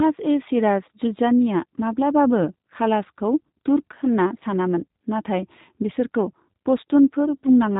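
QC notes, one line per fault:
Throughout: block size mismatch (truncated). A steady buzz runs under the speech at 46.9 Hz, the rate at which each block boundary arrives. One stage hands over longer blocks than the next stage takes in, and the tail of every block is dropped. The splice at each cut produces a repeating discontinuity and the periodic buzz. The buzz rate fits 1024-sample blocks at a 48 kHz rate. Playback speed stays at 1.0x.
Throughout: G.729 codec. The speech has a plainly audible rough, synthetic quality, and nothing is present above 3.8 kHz. The coder models each 10 ms frame as a vocal tract filter plus a pitch predictor and only a handful of pulses, so fine detail in the waveform is replaced by an approximation. The band limit removes the upper consonant energy. The character fits the G.729A variant at about 8 kbit/s.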